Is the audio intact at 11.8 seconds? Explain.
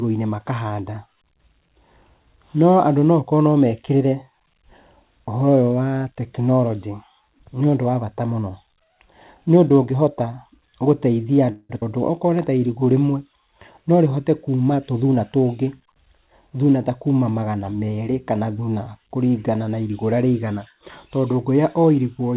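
No. From 11.52 to 11.72 s there is a call audio freeze. The last sound is stretched into a fading buzz or hiss for roughly 170 ms and ends in a brief silence. The likely cause is late packets draining the jitter buffer, so the receiver filled the wait and then resumed where it had stopped.

Right after, from 11.81 to 11.85 s, a skip ahead makes the sound jump abruptly forward with almost no gap. About 70 ms of audio was dropped, and the two sides are butted together.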